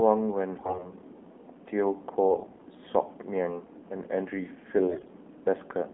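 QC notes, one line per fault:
Throughout: AMR narrowband mobile codec. The speech has plainly audible codec damage, sounding like a mobile call at a low bitrate, roughly 7.4 kbps. Everything sits in a 200 Hz to 3.5 kHz line band, so there is no air or sibilance above that, and nothing could pass above 4 kHz anyway. The codec rebuilds the voice from a vocal-tract model excited by sparse pulses, and at this rate that gives a buzzy, synthetic quality.
0.58–0.91 s, 2.29–2.67 s, 4.88–5.12 s: AMR bit errors. In these three bursts the voice keeps roughly its pitch and level but goes hoarse, scratchy and gargly. Corrupted frames still passed the checksum on the important bits, so the decoder played them instead of concealing them. The excitation pulses are misplaced and the finer pitch, gain and spectral values are wrong. The last burst sounds roughest and the middle one mildest, which fits heavier corruption late in the clip.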